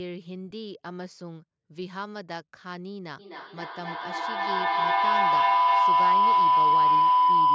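From 3.19 s to the end, feedback howl builds: the loop around 1 kHz repeats roughly every 0.3 s, rising to about 15 dB above the speech, a bright horizontal spectrogram line.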